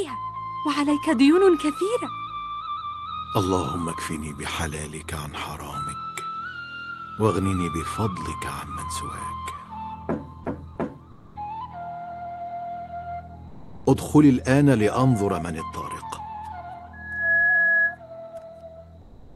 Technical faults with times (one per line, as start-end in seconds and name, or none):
11.11-11.35 comfort noise in place of the background
13.47-13.85 sound dropped by the voice detector
16.93-17.99 loudspeaker feedback squeal
19.01-19.36 comfort noise in place of the background